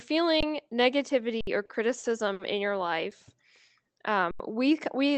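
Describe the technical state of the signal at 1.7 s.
At 1.7 s there is a short stall from a late packet, spanning 1.65 to 1.71 s. The jitter buffer ran dry, so the receiver stretched the preceding sound by 40 ms, then resumed from the same point. Nothing is lost; the sound is held too long.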